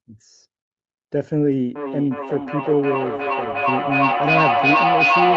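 From 1.75 s to the end of the clip, the speech gains a feedback echo between two devices. Two devices in the same room share the call. One plays back the other's microphone, and that microphone hears it again. Neither echo canceller removes the other's playback. Each word returns roughly every 400 ms, thinner and more ringing, within a band that stops near 8 kHz. The loop is loud, reaching about 4 dB above the speech, so the repeats build up instead of fading.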